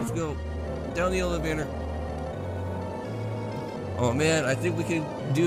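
Nothing stood out as a technical fault on listening.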